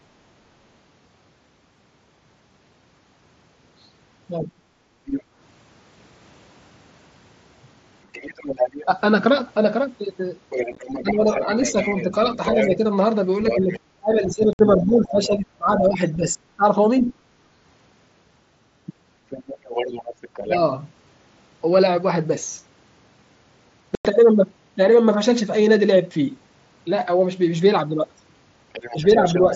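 From 4.4 to 4.61 s comes the first instance of speech suppressed in double talk. For roughly 150 ms the talker drops by about 20 dB, most likely because the echo canceller, hearing both sides at once, could not tell the near voice from loudspeaker echo and attenuated everything. On a waveform the speech envelope sags abruptly. On a spectrogram the harmonics and upper formants fade together. The same fault returns far more heavily from 8.85 to 17.18 s, with around four seconds affected in total and drops near 25 dB, so the voice repeatedly thins, dulls and breaks into pieces. A last, mild instance runs from 28.93 to 29.53 s, dipping only about 5 dB over a fifth of a second.

Between 4.89 and 5.36 s, background gated by the echo canceller pulls the room sound down by up to about 7 dB for roughly 200 ms. It happens again from 17.46 to 17.6 s, at up to about 9 dB for around 150 ms. Here the canceller clamps the microphone while the loudspeaker is active, then releases it. 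The ambience audibly ducks and recovers. A spectrogram shows the noise floor darkening in a brief block across all bands, with a step back up at release.

The other side's voice leaking through runs from 5.05 to 20.56 s, about 10 dB below the talker, and again from 28.73 s to the end, about 15 dB down. The echo canceller likely left residual far-end speech in the microphone signal. It sounds like a faint second voice underneath, appearing on a spectrogram as a weaker, separate harmonic pattern interleaved with the main one.

Unconcealed Bluetooth headset packet loss punches holes at 10.72 s, scattered over 60 ms with about 38 ms missing and no gap longer than 15 ms. It also hits 14.53 s, a 60 ms gap, and 23.95 s, nearly 100 ms. Lost headset packets were replaced by silence or an idle pattern rather than patched over. The result is hard-edged dropouts. Waveforms show flat cuts with sharp onsets, and spectrograms show vertical blank stripes. 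The audio through the mSBC link carries its light graininess alongside these gaps.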